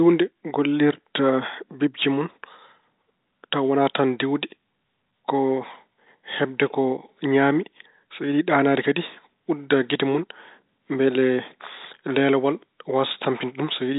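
No technical faults can be heard in the speech, which comes through G.711 telephone coding at its expected narrow bandwidth.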